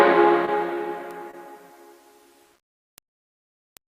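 A brief smear or wobble at 0.45 to 0.49 s marks a short concealed packet loss: about 20 ms of audio arrived too late, so the receiver extended the preceding sound to fill the hole before blending back into the real signal. At 1.11 s a single sharp, broadband tick, unconnected to anything else in the sound, is a bit error spike, where one flipped bit made one sample jump by a power of two and snap straight back. The same smeared patch returns at 1.31 to 1.35 s, a second short concealed packet loss with another 20 ms of synthesised continuation covering the gap. Two more one-sample ticks follow at 2.98 s and 3.77 s, each another bit error spike.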